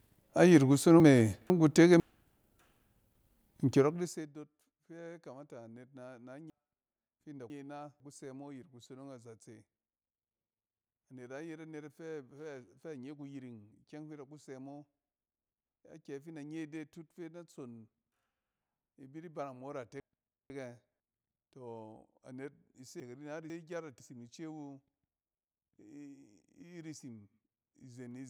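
Brief jumbled stretches of speech at 1.0 to 2.0 s, 6.5 to 8.0 s, 20.0 to 21.0 s and 23.0 to 24.0 s are chunks out of order: half-second chunks arrived late, one chunk behind (two at 6.5 s), leaving hard joins.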